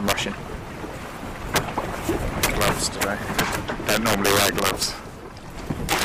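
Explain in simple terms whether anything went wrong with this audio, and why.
Integer overflow cracks the sound at 0.08 to 0.13, 1.56 to 1.58, 2.43 to 3.04, 3.39 to 4.83 and 5.89 to 6.03 seconds. Loud peaks exceeded the largest number the system could store, and instead of being capped they wrapped to the opposite extreme, causing harsh cracks, worst in the two longest stretches.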